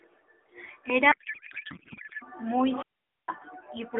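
From 1.12 to 2.23 s the speech collapses into garbled noise and warble, a codec payload misread. The AMR frames appear to be octet-aligned but decoded as bandwidth-efficient, so every field lands in the wrong bits. On a spectrogram the formant structure gives way to smeared, patternless energy within the narrow band.

From 2.70 to 3.35 s comes a wireless microphone squelch dropout. The radio link fades, static briefly rises, then the receiver's squelch mutes the output for about 0.46 s before the speech returns. On the waveform this shows as a short burst of hiss and then a flat, near-silent stretch. On the spectrogram it is a blank gap across the band, which here is limited to roughly 300 Hz to 3.5 kHz by the AMR narrowband path, whose light coding texture fits about 12.2 kbps.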